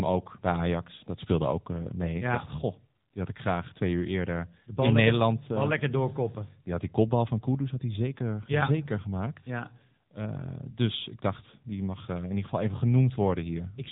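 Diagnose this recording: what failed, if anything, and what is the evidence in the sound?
Codec stage: AMR narrowband mobile codec throughout. Vocal-tract modelling makes the speech buzzy, which fits a low mode near 8 kbps. A spectrogram shows a hard ceiling at 3.8 kHz.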